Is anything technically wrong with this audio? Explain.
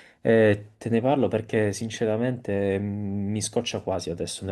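Yes. At 1.49 s in this speech there is an overlap between stream segments: sound trimmed at a segment boundary makes the waveform jump, giving a tiny skip with no silent gap, unlike a dropout.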